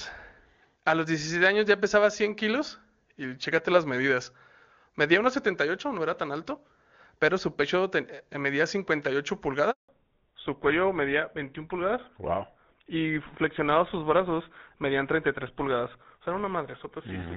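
At 9.71 s a handover gap opens: the speech cuts out within a few tens of milliseconds and stays silent for 180 ms, until 9.89 s, as the call is passed between networks and no frames arrive. Whatever was said in that interval is simply missing.

From 9.89 s to the end the call falls back to narrowband. Before the switch the clean wideband sound fits AMR-WB HD Voice at its top 23.85 kbit/s rate. After it, nothing above 4 kHz remains, pointing to GSM full rate at 13 kbit/s, so the speech turns duller and rougher.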